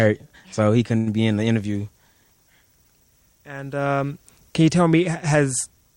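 At 0.97 to 1.09 s the sound hangs on unnaturally with a slight buzz or dip: a short stall from a late packet. The receiver stretched about 90 ms before resuming, losing nothing.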